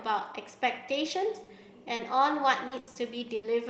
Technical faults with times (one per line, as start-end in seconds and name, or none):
1.43-1.50 short concealed packet loss
1.95-2.02 short concealed packet loss
2.67-2.98 short concealed packet loss
2.79-2.90 burst of packet loss
3.35-3.46 burst of packet loss